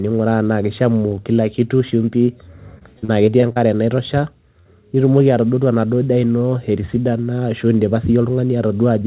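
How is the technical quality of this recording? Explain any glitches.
The recording has audible packet-loss glitches. Its sound stops at 4 kHz, which points to a narrowband call codec such as G.711.

Short concealed packet loss occurs at 1.90–1.93 s, 2.25–2.28 s and 4.61–4.67 s. Audio arrived too late. The receiver extended the preceding sound, leaving brief smears or wobbles.

Repeated packet loss (robotic sound) runs from 2.78 to 3.59 s. Six gaps hit this stretch, the longest 39 ms. Roughly a fifth is patched, so it sounds choppy.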